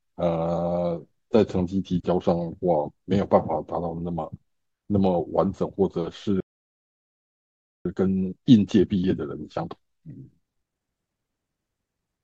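A speech recording with two linked playback faults. Likely starved of data or blocked, the player produces a playback stall from 6.40 to 7.85 s, cutting the speech off mid-flow for about 1.45 s of silence. The player then works off its backlog by splicing out short pieces and cross-fading them, a time-compressed catch-up from 7.85 to 10.85 s that runs the speech about 1.25 times fast at normal pitch.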